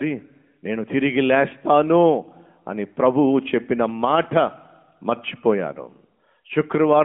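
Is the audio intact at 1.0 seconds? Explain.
Yes, the audio is intact at 1.0 seconds: nothing breaks, drops out or distorts at that moment, and the sound there simply carries the narrowband character of the AMR mobile codec at 12.2 kbps, with nothing above about 3.5 kHz.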